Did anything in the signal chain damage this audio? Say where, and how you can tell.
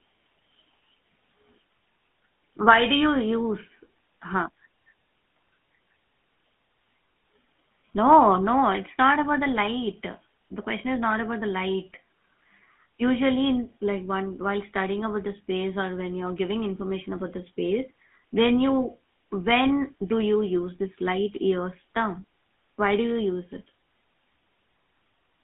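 Yes: buzzy, gravelly speech confined to roughly 150 Hz to 3.5 kHz throughout points to the GSM full-rate codec, whose pulse-driven excitation fits 13 kbps coding.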